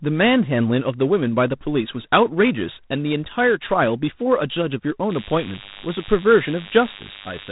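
G.726 ADPCM coding runs through the whole clip. The codec stores each sample as a few bits describing how far the signal departs from an adaptive prediction. At 24 kbit/s there are only three bits a sample, so the prediction error is coarsely quantised and leaves a harsh, rasping hiss that rises and falls with the speech level. The band is also cut, with nothing passing above 3.8 kHz, which gives the speech a muffled telephone quality.

DECT cordless phone buzz starts at 5.10 s and lasts to the end. A nearby DECT handset or base station sends a short radio burst every 10 ms, and the audio circuitry rectifies those bursts into the signal. The result is a steady, thin buzz at 100 Hz with a dense stack of harmonics. It sits fairly high, about 10 dB below the speech.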